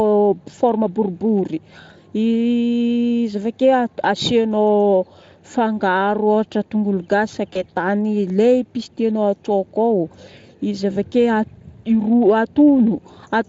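VoIP packet loss concealed by the speech codec appears at 7.53 to 7.63 s. The gap points to a single lost 20 ms frame, which the Speex decoder covered by extending its last pitch and filter state at falling gain. The speech there smears into a brief buzzy tone or coloured noise that fades, and because each frame builds on the one before, the sound stays weak or distorted for tens of milliseconds or more before it settles into the light Speex coloring heard throughout.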